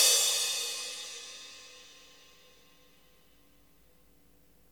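Dropped samples, at 0.33 s and again at 1.6 s: each time a single sharp click cuts through the sound, showing as a thin vertical line across the spectrum. The likely cause is a tiny gap in the sample stream, well under a millisecond lost, so the waveform leaps straight from one value to a later one. That step is far too brief to remove anything audible; the abrupt discontinuity itself is what produces the click.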